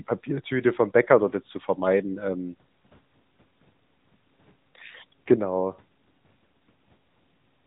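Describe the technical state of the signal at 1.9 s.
At 1.9 s the speech sounds boxed-in and plainly buzzy and synthetic, with nothing above 3.8 kHz, the AMR narrowband mobile codec damage that runs through the whole clip. Its 8 kHz sampling and 20 ms frames rebuild the voice from a vocal-tract model, and the plainly audible roughness fits a mid bitrate near 10 kbps.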